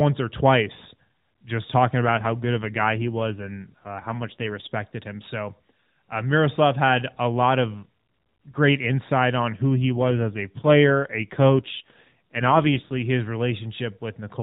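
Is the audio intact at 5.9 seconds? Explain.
Yes, the speech at 5.9 seconds is intact, with nothing there beyond the narrowband sound of a mobile AMR codec carrying it normally.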